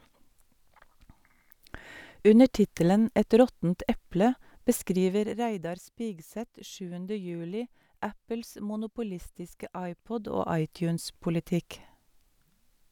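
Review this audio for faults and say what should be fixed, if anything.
No faults; nothing needs fixing.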